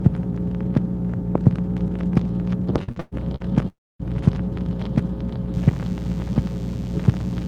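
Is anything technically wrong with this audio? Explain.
Yes, there are three faults. Repeated packet loss (robotic sound) runs from 2.83 to 3.43 s. Audio packets went missing four times in that stretch, the longest hole 115 ms, and each hole was patched by stretching the last bit of sound forward. About 41% of the stretch is concealment, so the audio turns choppy, with pieces missing in the gaps. The filling covers about 245 ms and about 240 ms of real audio is gone.

A long network dropout follows from 3.68 to 4.02 s. No audio arrived for about a third of a second, likely because the network connection stalled. The receiver carried the last sound on as a fading buzz or hiss, then fell to silence for about 250 ms. When the audio resumes, roughly 320 ms of it has been lost rather than delayed.

DECT cordless phone buzz starts at 5.54 s and lasts to the end. A DECT handset or base nearby transmits a radio burst every 10 ms, and the audio circuitry rectifies that into a thin, steady 100 Hz buzz rich in harmonics, sitting about 30 dB below the sound.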